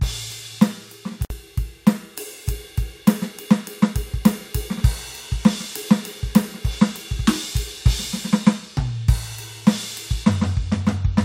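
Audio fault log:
1.25–1.30 s: gap at a join of encoded pieces. The music drops out for about 54 ms with smeared edges, then resumes exactly where it stopped. Separately encoded segments were joined without trimming the encoder's leading delay and final-frame padding.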